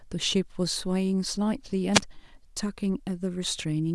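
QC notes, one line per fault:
1.93 to 2.01 s, wireless microphone squelch dropout: a brief swell of hiss, then a very short hole of near silence lasting about 4 ms before the speech returns. The analogue FM radio link faded, the receiver's squelch cut the output, then reopened as signal recovered.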